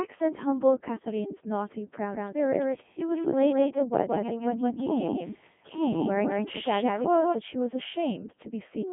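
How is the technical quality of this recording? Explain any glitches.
Technical quality is poor: the speech runs through a Codec 2 vocoder from start to finish. The decoder rebuilds the voice from pitch, voicing and a spectral envelope, so it sounds robotic and buzzy, with damage consistent with a 3.2 kbit/s mode. A spectrogram shows neat harmonic stripes between 150 Hz and 3.5 kHz and nothing above 3.7 kHz, and the waveform bears little resemblance to natural speech.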